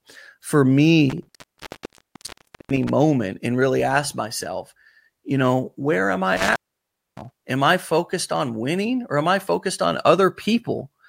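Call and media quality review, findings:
Intermittent contact, 1.10–2.89 s. Speech drops out for about 1.42 s, crackle at both edges, faint hiss in the gap. Probable component: loose cable or plug in the capture path. Connection opens briefly, signal lost until contact returns.

Intermittent contact, 6.37–7.36 s. Second dropout, about 0.61 s open. Same crackle on break and reconnect, hiss between. Same mechanism, same suspect connector. Reseat or replace the cable.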